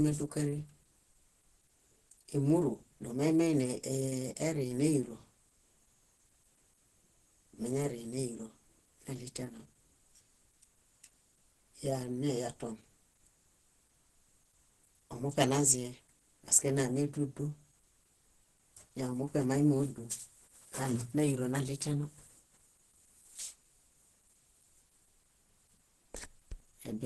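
The speech sounds muffled and hoarse from start to finish, with a grainy, rough edge on the voice and no content above about 12.1 kHz. The damage is heavy. The likely cause is Opus compression at a low bitrate, something around 12 kbps. At that rate the encoder runs in its hybrid mode, coding the lower band with its speech coder, which gives the hoarse, muffled quality, and band-limiting the top end, which gives the sharp ceiling.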